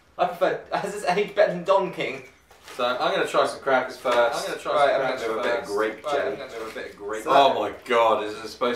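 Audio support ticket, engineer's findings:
Doubled audio track, 3.98–7.72 s. Full-band copy trailing roughly 1.5 s behind, about 5 dB down, no decay or room colour, abrupt start and stop. Likely cause: second capture via slower path, or edit holding two offset copies.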